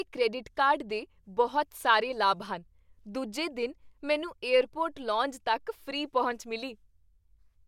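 Listening to this speech recording, nothing stood out as a technical fault at any point.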